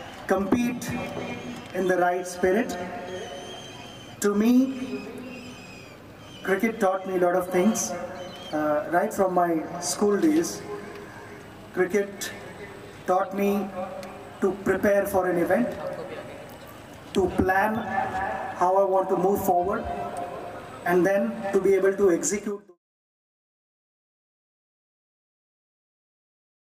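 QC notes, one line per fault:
Nothing stood out on listening, and the level eases down smoothly in a fade-out that settles by 22.78 s.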